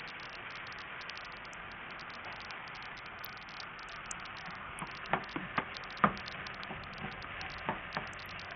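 From start to end, the treble is missing or flickers in and out, with gritty noise and aliasing over what remains. This is likely Bluetooth SBC compression with a starved bit pool, which fits roughly 48 kbps: the upper sub-bands get few or no bits, and the lower ones are coarsely quantised.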